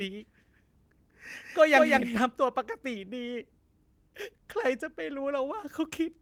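Speech carrying a doubled audio track from the start to 2.18 s: a second full-band copy trails about 200 ms behind, roughly 5 dB quieter, and stops abruptly. Unlike room echo it has no decay or colouring, likely from a slower second capture path.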